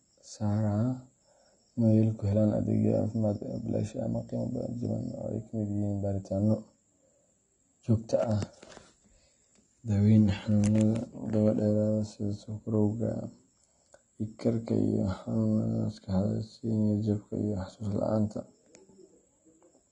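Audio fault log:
Throughout: AAC compression. The speech sounds dull, with nothing above 9.7 kHz, and the codec damage is plainly audible as a smeared, warbling texture on sibilants and sustained sounds. This is likely low-bitrate AAC-LC coding, which fits about 32 kbps, where bands are dropped or coarsely quantised.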